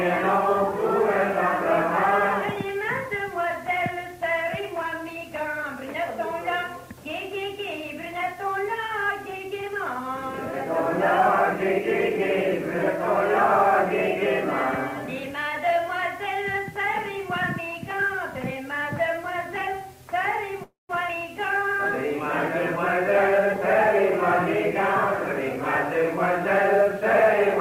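From 20.63 to 20.91 s there is a call audio freeze. The likely cause is delayed packets draining the jitter buffer, so the receiver extended the last sound. That adds about 256 ms of fill, fading to roughly 160 ms of silence, before the audio resumes where it stopped with nothing lost.

At 21.07 to 21.10 s comes a skip ahead. A stretch of audio was discarded while later packets were already queued, so playback jumps forward with almost no gap. Roughly a tenth of a second is missing, and the two sides are butted together.

From 23.02 to 24.11 s a jitter buffer speed-up follows. The buffer held more audio than its target, so the receiver trimmed short pitch-period pieces repeatedly, removing around 70 ms. The sound runs about 5% fast at unchanged pitch and feels slightly hurried.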